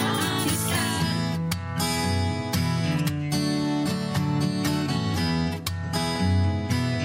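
No technical faults are audible.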